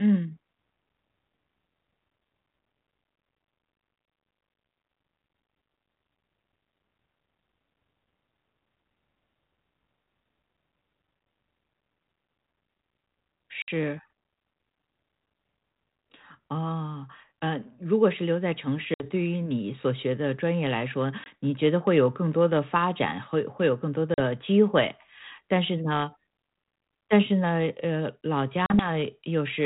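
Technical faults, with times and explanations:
13.62, 18.94, 21.24, 24.14 and 28.66 s, packet loss on an ADPCM call: one to three packets went missing each time and were filled with silence, giving abrupt gaps of 60, 60, 20, 40 and 40 ms. Because the receiving decoder's adaptive predictor and step size drifted away from the sender's during each gap, the speech comes back with brief, slight distortion, until the two re-align some tens of milliseconds later.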